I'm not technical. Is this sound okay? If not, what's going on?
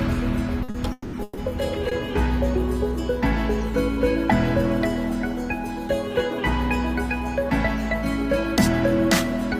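No. Early in the clip the sound is interrupted five times. Short stalls from a late packet occur at 0.63, 0.70 and 1.89 s. Each time a piece of audio failed to arrive on schedule, and the player held the last sound for about 50, 40 and 20 ms until it came. You hear a brief stretched, slightly buzzy moment, and nothing is skipped.

Two longer call audio freezes follow, from 0.92 to 1.15 s and from 1.23 to 1.39 s. During each one the sound turns into a fading buzz, and the first ends in a moment of silence. The sound then picks up exactly where it stopped. The likely cause is that the audio data was held up in transit and the player ran out of sound to play.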